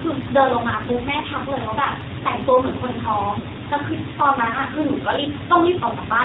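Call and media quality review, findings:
AMR narrowband mobile codec across the whole call: speech squeezed through an 8 kHz-sampled vocal-tract model, nothing above 4 kHz, plainly buzzy and synthetic; the sound fits a low mode near 7.4 kbps.

Lost AMR speech frames at 1.22–1.26 s and 3.40–3.45 s: decoder concealment repeats the last good pitch and vocal-tract settings at dropping gain, causing a brief dip or warble. The gaps of 20 ms and 40 ms fit one and two frames lost.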